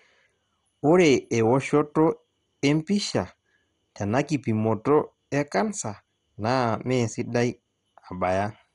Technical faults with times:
0.00-8.75 MP2 compression

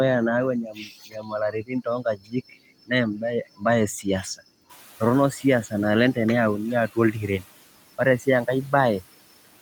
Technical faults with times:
4.69-5.52 noise suppressor catching up

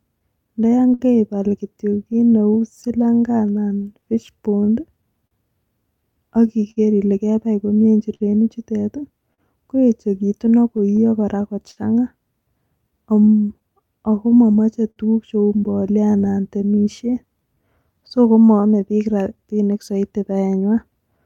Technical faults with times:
0.00-21.26 clock drift between sender and receiver
0.19-1.02 repeated stalls (stutter)
2.13-5.34 scattered short gaps
2.53-21.19 repeated timing corrections
6.71-6.79 short stall from a late packet
8.14-8.23 short stall from a late packet
9.34-9.41 short stall from a late packet
10.52-11.80 scattered short gaps
12.91-14.99 scattered short gaps

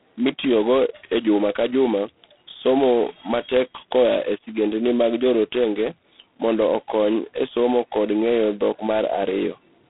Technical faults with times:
0.00-9.89 G.726 ADPCM

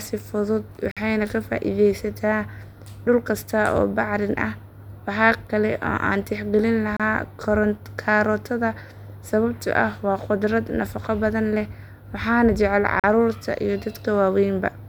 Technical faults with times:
0.91-0.97 gap between stream segments
6.97-7.00 gap between stream segments
13.00-13.04 gap between stream segments

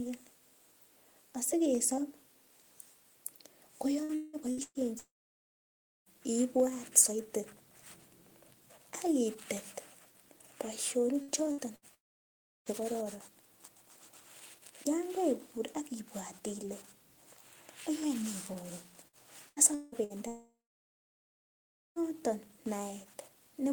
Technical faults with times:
4.03-4.78 repeated packet loss (robotic sound)
4.99-6.09 long network dropout
11.22-11.85 burst of packet loss
11.94-12.69 long network dropout
19.08-20.13 repeated packet loss (robotic sound)
20.28-21.99 long network dropout

